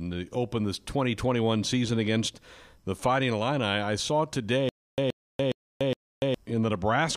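A speech clip with a stutter with silent gaps from 4.69 to 6.34 s: a 123 ms burst repeats four times, each followed by 290 ms of silence, every 414 ms. The stream likely stalled and replayed its last fragment at each retry, losing the audio that should have played.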